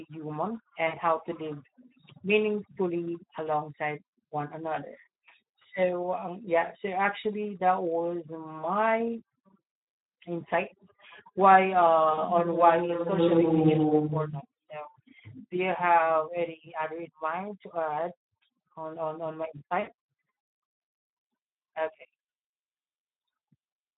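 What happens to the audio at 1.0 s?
Right around there, from 0.87 to 0.99 s, there's VoIP packet loss concealed by the speech codec. About 60 ms of audio went missing, and the decoder filled it by stretching its last pitch and filter while dropping the gain, so you get a buzzy or noisy, fading smear just before "how to live".

Underneath that, the whole clip carries plainly audible Speex codec damage. The speech sounds hoarse and noisy because the CELP coder is starved of excitation bits, which fits a setting around 11 kbps.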